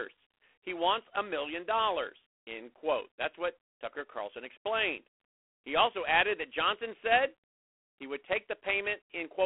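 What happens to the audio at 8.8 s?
A harsh, rasping hiss rides on the speech and rises and falls with its level, with nothing above 3.9 kHz. This is G.726 ADPCM throughout, coding too few bits of prediction difference per sample, which fits 24 kbit/s.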